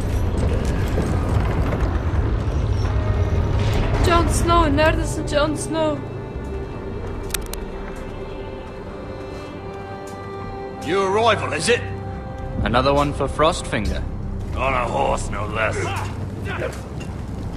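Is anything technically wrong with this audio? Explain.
Yes. From 7.30 to 7.54 s there is cable scratch noise, a dense, uneven rustling burst sitting about 10 dB below the main sound. It likely comes from a worn cable or connector being moved, its contact resistance changing rapidly. Unlike separate digital clicks, this noise is continuous and gritty.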